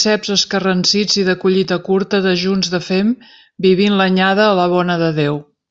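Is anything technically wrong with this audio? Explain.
No, the signal shows no technical faults anywhere in the recording.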